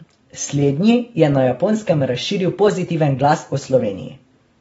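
From start to finish the speech carries plainly audible AAC compression damage. Nothing comes through above about 7.7 kHz, so the top end sounds dull and closed off. Sibilants and held sounds pick up a fizzy, warbling texture, as if the encoder is guessing at the detail instead of keeping it. That points to a low-bitrate encode, likely AAC-LC at around 24 kbps, where the coder drops the high band and thins out the rest to fit.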